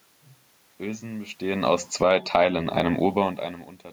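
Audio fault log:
1.72–2.33 s, automatic gain falling: the gain control judged the input too loud, or its background noise too strong, and lowered its gain gradually, so the level sinks by about 13 dB. The room noise drops along with the speech, which marks a gain change rather than talker movement.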